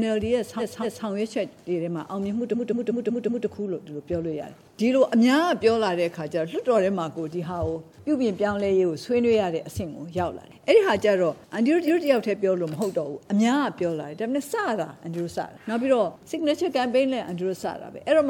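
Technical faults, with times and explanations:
0.58–1.05 s, 2.53–3.46 s and 11.87–12.05 s: repeated frames. A short block of about 232 ms, then 186 ms, gets replayed two, five and one extra times, so the sound stutters and the clip runs about 1.6 s longer.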